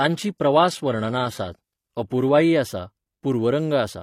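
From 0 to 2.53 s, the speech has the sound of an adaptive stream starting at a low bitrate. The player began on a cheap version to start quickly. The treble is thin and partly synthetic, which fits HE-AAC at around 20 kbit/s. Codec artefacts are strong. At 2.53 s the quality jumps up with no gap, to something like AAC-LC at 96 kbit/s. From there the highs extend to about 20.3 kHz.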